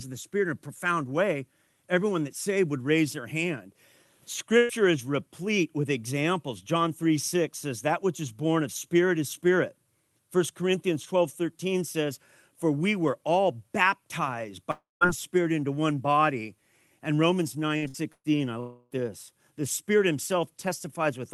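At 4.57 s there's a burst of packet loss: roughly 120 ms of the speech went missing, and the receiver smeared the last sound over the gap before jumping ahead.

From 14.71 to 15.04 s comes a longer hole, likely a long network dropout. About 0.3 s is lost, the held sound fades, and near-silence follows before the speech picks up again further on.

Around 18 s the loss bunches up, with packet-loss bursts at 17.77, 17.88 and 18.12 s. Each skips 60 to 120 ms as a brief fading buzz or hiss, and the last one drops briefly to silence.

At 18.60 to 18.93 s there's another stretch of roughly 0.3 s that's probably a long network dropout. This time the gap is filled entirely with a decaying continuation of the prior sound rather than going quiet.

All of this rides on a call-codec path whose top end stops around 12 kHz, which fits Opus at about 32 kbps.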